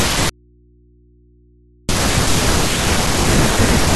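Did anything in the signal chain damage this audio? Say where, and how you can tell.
Yes. From 0.29 s to 1.89 s the speech drops out to a faint residue: about 1.6 s of mains hum roughly 35 dB below the signal, with abrupt edges. That points to the analogue wiring, likely a brief open connection leaving the live input floating.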